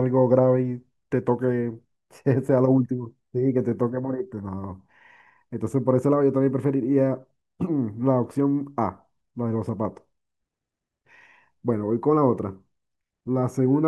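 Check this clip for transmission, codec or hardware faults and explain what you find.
No faults can be heard anywhere in the speech. There is nothing to report for any part of the chain from capture to playback.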